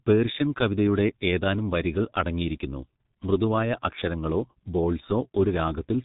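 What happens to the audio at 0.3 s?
At 0.3 s the speech is carrying G.723.1 codec damage, which runs through the whole clip rather than starting there. The codec splits the signal into 30 ms frames and rebuilds each from a coarse voice model that adapts slowly, and the heavy smearing heard here fits a very low rate of around 6 kbit/s. Nothing above 3.8 kHz survives, so the speech sounds muffled and hoarse, with consonants blurred into their neighbours.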